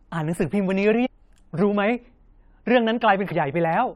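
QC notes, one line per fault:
1.05–1.07 s and 3.30 s, damaged data in a compressed stream: at both points, part of the compressed speech stream arrived corrupted, with bytes lost, zeroed or overwritten. The decoder misreads the broken frames, loses its place in the stream and has to hunt for the next valid frame header before normal decoding resumes. Each time, the speech is briefly replaced by a short chirp, squawk, click or hole of about 20 ms.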